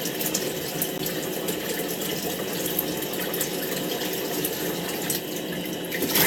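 A recording of sounds, interrupted by a gap between stream segments at 0.98 s: a hard-edged hole of about 15 ms where the timestamps of adjacent segments fail to meet and the player inserts silence. Its position fits a 1-second segment boundary, and no audio is lost.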